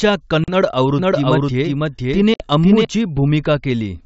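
A speech recording over G.722 wideband telephone coding, consistent with the 64 kbit/s mode, showing packet loss on an ADPCM call twice. A 40 ms hole sits between 0.44 and 0.53 s, and a 60 ms hole between 2.34 and 2.45 s, which fits roughly two and three lost packets. Each shows as a hard-edged blank column on the spectrogram and a flat gap in the waveform. After each hole the speech resumes with a brief level or distortion error, because the decoder's predictor and step size have to resynchronise. From 0.99 to 2.85 s there is a doubled audio track: a second full-band copy at about equal level trails the original by roughly half a second, with no reverberant tail. It is likely from the signal being captured twice through a slower path. On the spectrogram the formant patterns repeat, shifted right, and start and stop abruptly.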